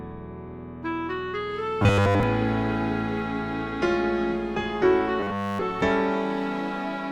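Robotic sound from repeated short buffers appears twice, from 1.83 to 2.23 s and from 5.20 to 5.62 s, where the audio turns into a rigid, metallic buzz at 100 Hz. The likely cause is that fresh audio stopped arriving in time and the playback side looped its last fragment instead. A 100 Hz buzz fits a repeat of about 10 ms. Essentially all of each stretch is repetition, so the real signal there is skipped.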